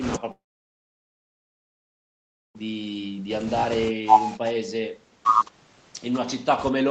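From 0.31 s to 2.61 s the speech drops out for about 2.3 s, most likely a long network dropout. The receiver briefly extends the last sound as a fading buzz, then leaves near-silence for roughly 2.2 s. The speech resumes without the missing stretch. Throughout, the audio carries nothing above 8 kHz, consistent with a band-limited call codec.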